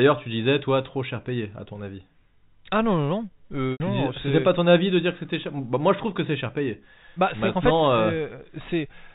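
Packet loss with pitch repetition, 3.72 to 3.80 s: 80 ms went missing. The last pitch period loops, fades to silence, then speech cross-fades back.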